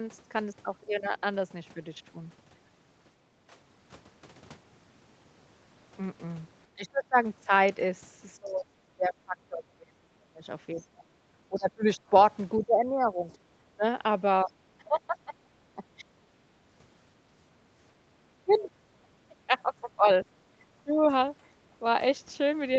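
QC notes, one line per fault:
0.84–1.16 s, 6.74–16.05 s and 18.2 s to the end: speech suppressed in double talk. The talker's level dips by about 10 dB in the first brief patch, then by up to about 25 dB across roughly 4 s of the long middle stretch, and by about 20 dB in the final run. This is likely an echo canceller hearing both sides at once, failing to tell the near voice from loudspeaker echo, and pulling the whole microphone signal down.
11.56–12.62 s: other side's voice leaking through. A second, fainter voice sits about 20 dB under the talker for roughly a second, inside the long suppression stretch. The far-end audio was likely playing on the talker's loudspeaker and reached the microphone, and the echo canceller left a residue of it in the signal instead of removing it fully.
16.33–17.33 s and 20.43–20.56 s: background gated by the echo canceller. The room sound briefly drops, by up to 12 dB in the first case and 9 dB in the second, each time for about 150 ms in total before recovering. 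The canceller clamped the microphone hard while loudspeaker output was present, so the ambient floor vanishes momentarily and then returns once it releases, audible against the Opus-coded call audio with its 8 kHz top end.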